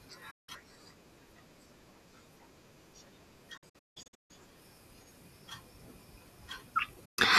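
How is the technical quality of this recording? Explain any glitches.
The speech is interrupted three times by digital broadcast dropouts. They fall at 0.31 to 0.49 s, at 3.57 to 4.31 s, and at 7.05 to 7.19 s. Each time the receiver stopped getting usable frames and muted, so the sound fades to silence within about 8 ms and the speech resumes further on, with the missing stretch gone. The middle event breaks into several short holes, 480 ms lost across 720 ms, the longest 168 ms. The quick fade and the clean skip, with no clicks, warble or smeared filler, distinguish this from a hard edit or packet-loss concealment.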